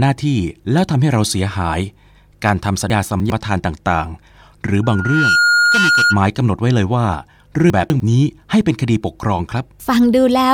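Between 2.9 and 3.3 s the audio jumps: chunks out of order. A 100 ms piece arrives three chunks late and plays after material that should follow it, leaving hard joins at each seam. Unlike a dropout, nothing is missing. The sound is all there but reshuffled, so the passage seems jumbled rather than gapped.

From 4.83 to 6.23 s a loudspeaker feedback squeal takes over. The microphone is hearing its own loudspeaker, and at 1.4 kHz the loop gain tops one, so that frequency feeds itself, swelling over roughly half a second until it sits about 5 dB above the programme. A steady test tone or hum starts at full level. This one grows from nothing into a piercing single pitch.

A second case of chunks out of order runs from 7.7 to 8.0 s. Here a 100 ms chunk lands two chunks late, giving the same scrambled jolt over a slightly shorter span.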